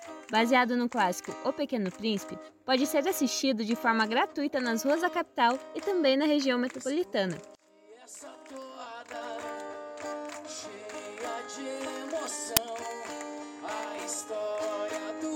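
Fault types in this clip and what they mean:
File tags played as audio: at 12.57 s there's a tiny click of very loud white noise with hard edges. That's an embedded cover picture being read as sample data, and since compressed image data is basically random, it comes out as pure static.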